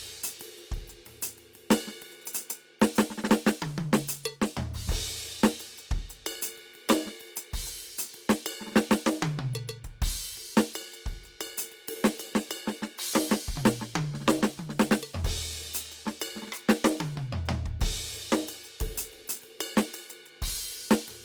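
Opus compression runs throughout the music, from start to finish, and is plainly audible. The band energies stay in place, so there are few swirling holes, but tones come across noisy, rough and grainy, as if thin bands were being filled with folded copies or noise. Content still reaches about 20.2 kHz, so the bandwidth has not narrowed. The likely cause is Opus in its music mode at a low rate, which fits about 24 kbps.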